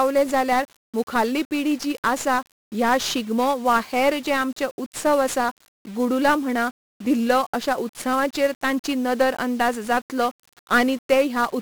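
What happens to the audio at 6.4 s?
At 6.4 s the speech carries the same 1-bit DFPWM compression heard across the whole clip: each sample nudges an adaptive level up or down, leaving heavy broadband fuzz and crackle. This is consistent with roughly 48 kbps.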